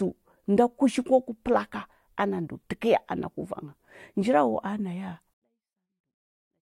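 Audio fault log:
5.34 to 6.66 s, 24-bit alignment error (too quiet): right at 5.34 s the speech falls away by about 48 dB and stays there to the end, still clean but barely audible. The samples were packed as 24-bit values in the low bytes of a 32-bit word and then read as full 32-bit integers, so every value lands 8 bits too low. That shift is a fixed 256-to-1 drop in level with no added distortion.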